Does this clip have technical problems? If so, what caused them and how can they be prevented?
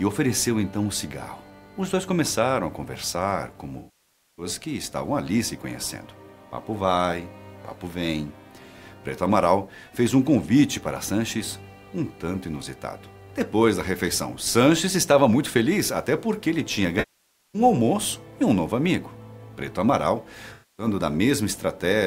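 Yes. AAC frame loss with concealment occurs at 3.78 to 4.46 s, 16.99 to 17.62 s and 20.53 to 20.86 s. Blocks of compressed frames went missing, and the decoder filled each gap of roughly 0.6, 0.55 and 0.26 s by reusing the last good spectrum. Unlike a hard dropout to silence, the gaps carry a smeared, phasey stand-in for the sound. Protecting the stream with error correction or retransmission on the delivery link would prevent this.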